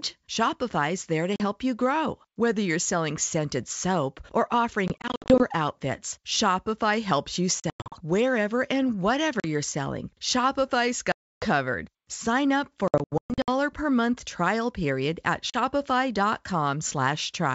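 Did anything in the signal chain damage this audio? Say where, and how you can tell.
Yes. The damage happened in the network, as packet loss on an ADPCM call carried in G.722. Hard-edged silent holes fall at 1.36, 4.88–5.45, 7.60–7.98, 9.40 (just before "you're selling"), 11.12–11.46, 12.88–13.49 (before "per month trial period") and 15.50 s (after "month trial period at"). The 40 ms gaps fit about two 20 ms packets. The worst is 380 ms, scattered over 600 ms. After each hole the speech returns slightly distorted for a moment, because the decoder's step size and predictor have drifted from the sender's.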